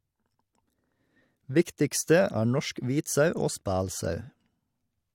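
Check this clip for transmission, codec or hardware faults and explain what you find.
No faults can be heard anywhere in this speech.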